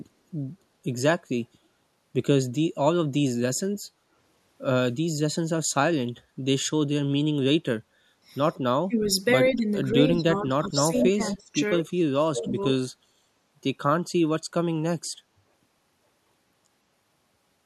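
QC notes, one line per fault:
3.97 to 4.01 s, background gated by the echo canceller: the room tone dips about 6 dB for roughly 40 ms as the canceller clamps the mic, then recovers.
8.84 to 9.1 s, 9.51 to 11.6 s and 11.76 to 12.77 s, speech suppressed in double talk: the speech ducks hard, around 30 dB at worst, likely because the canceller couldn't separate talker from far-end echo.
10.95 to 11.07 s and 11.25 to 11.36 s, echo leak: short scraps of the speech come back 163 ms late, the first fairly close to speech level, the second much quieter, likely as residual loudspeaker pickup gets through.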